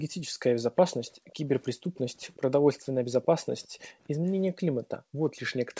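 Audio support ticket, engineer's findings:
Background gated by the echo canceller. Room tone dips hard, about 40 dB at the deepest, then recovers. Spans 0.05–0.42 s, 1.15–1.93 s, 2.91–4.03 s, 4.56–5.21 s. Component: AEC suppressor. It clamps the mic gain while far-end audio plays, so the ambience cuts out with each clamp. Short gaps, under half a second to under a second each.

Echo leak. A faint delayed copy of the speech trails it by about 0.37 s, sitting roughly 30 dB below the direct speech. Heard at 1.07–1.35 s and again through 1.95–4.31 s. Likely cause: residual echo the far-end canceller failed to subtract, returned from a loudspeaker pickup. The constant delay matches a fixed acoustic-plus-network loop. Bandwidth tops out at 8 kHz, which fits a G.722 call path.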